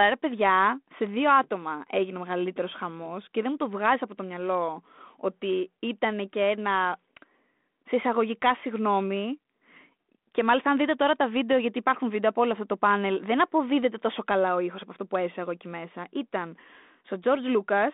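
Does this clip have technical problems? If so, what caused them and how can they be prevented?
No, this clip has no technical problems, so there is nothing to prevent.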